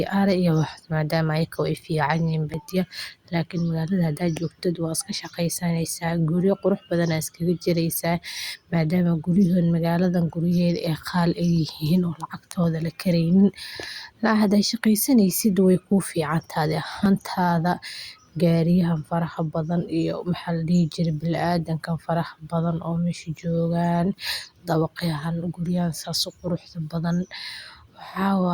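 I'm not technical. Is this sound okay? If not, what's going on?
No. There are two small glitches, at 2.54 and 17.06 seconds. Each is a tiny jump forward in the speech, as if a sliver of sound was snipped out and the ends were pushed together. Only a very short slice goes missing, around a fiftieth of a second. The likely cause is a dropped buffer (overrun): the recording program fell briefly behind, so a chunk was overwritten before it could be saved.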